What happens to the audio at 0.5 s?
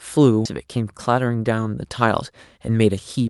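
At 0.45 s a skip ahead drops roughly 0.7 s of speech, jumping straight forward with no gap; a spectrogram shows an abrupt vertical seam joining mismatched patterns.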